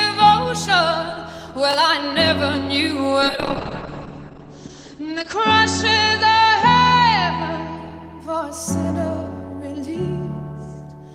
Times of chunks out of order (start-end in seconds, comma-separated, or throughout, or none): 1.71-1.74